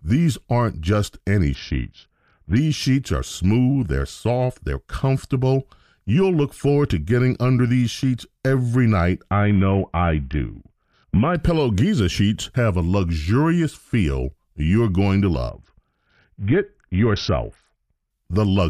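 Three Bluetooth SBC bit pool drops, at 1.54–2.56 s after "these aren't just any", 9.31–11.35 s after "these sheets every night", and 15.49–18.10 s after "feel you're going to", cut the bit budget, dulling the treble and adding gritty noise, which fits a fall to roughly 55 kbps.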